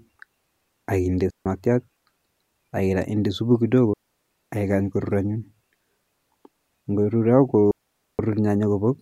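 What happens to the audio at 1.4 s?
At 1.4 s the speech falls into a digital wireless dropout lasting from 1.30 to 1.46 s, about 155 ms. The receiver lost too much data and muted with a very fast fade, leaving a clean hole of near silence. Unlike an analogue wireless dropout, there is no hiss or noise burst at either edge.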